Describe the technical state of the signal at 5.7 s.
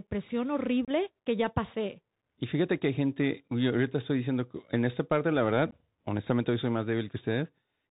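At 5.71 s the Bluetooth link between headset and phone dropped about two voice packets, and nothing was done to conceal the loss. Roughly 15 ms of signal was replaced by silence or an idle pattern. The result is unconcealed Bluetooth headset packet loss: a brief, hard-edged hole in the speech just after "en esta parte la", with the flow resuming abruptly before "honestamente hoy soy más".

Across this moment, as everywhere in the clip, the audio passes through the Bluetooth CVSD headset codec. Its one-bit up-or-down coding, consistent with the 64 kbit/s CVSD link, cuts everything above 4 kHz. The adaptive step cannot keep pace with loud high-frequency content, so the speech around the gap sounds plainly degraded: muffled and narrowband, with scratchy sibilants and a granular hiss beneath it.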